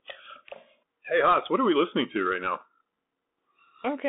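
Speech, heard throughout through a Bluetooth CVSD headset codec. The band runs about 200 Hz to 3.6 kHz, with nothing above 3.8 kHz. Plainly audible granular slope-tracking distortion fits 64 kbps.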